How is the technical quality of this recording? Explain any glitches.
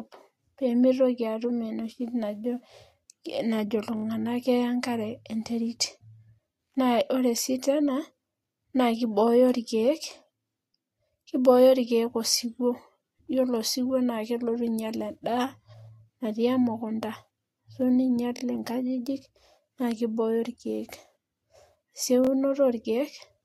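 Three short stutters interrupt the speech, at 3.97 to 4.04 s, 18.37 to 18.41 s and 22.25 to 22.29 s. Each is a repeated buffer: a fragment of about 23 ms, which fits a 1024-sample buffer, plays four times in a row at the first point and three times at the other two, with a hard join at every repeat. New audio arrived late, so the device replayed its last buffer, and no speech seems to go missing.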